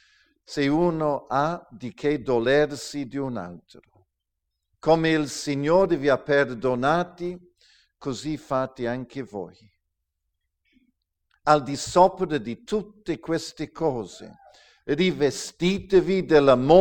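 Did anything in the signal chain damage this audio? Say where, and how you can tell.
No, nothing audible points to damage at any stage between capture and playback.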